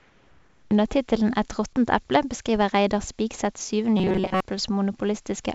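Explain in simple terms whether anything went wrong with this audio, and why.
Two things went wrong in this speech clip.

From 0.00 to 0.71 s, there is comfort noise in place of the background. The real room sound is gone. A smooth, featureless hiss stands in, a little quieter. The likely cause is the sender pausing transmission during silence, leaving the receiver to fake the background.

From 3.97 to 4.40 s, there is a robotic sound from repeated short buffers. The speech turns into a stiff, metallic buzz near 188 Hz. Most of that stretch is repeated audio. The likely cause is late-arriving audio, with a tiny chunk replayed over and over instead.

The call path itself carries nothing above 8 kHz.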